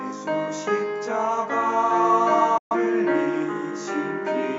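A digital broadcast dropout mutes the audio from 2.58 to 2.75 s, with a 3 ms fade, consistent with about three corrupted frames discarded by the receiver.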